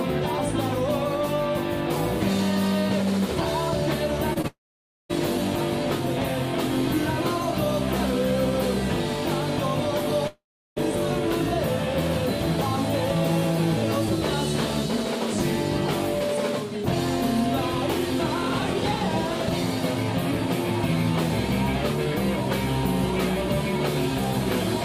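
Two brief smears interrupt the audio at 4.33 to 4.37 s and 4.41 to 4.46 s. Each is short concealed packet loss. About 20 ms went missing, and the receiver bridged it by extending the preceding sound before rejoining the real signal. From 4.48 to 5.11 s the sound carries on as a fading continuation and then goes silent for about 0.53 s. A similar gap runs from 10.27 to 10.78 s, with about 0.35 s of silence. The likely cause is a long network dropout. Roughly 0.6 s and 0.5 s of audio never arrived and are not recovered.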